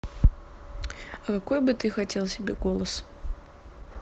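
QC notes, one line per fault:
1.39 s to the end, adaptive stream at a lower bitrate: the sound abruptly picks up more codec artefacts, with no gap or glitch at the switch. That's the player stepping down to a leaner version of the stream when the connection slowed, and the character fits Opus dropping from something like 64 kbit/s to around 16 kbit/s, where the encoder trims treble and fakes some of it to save bits.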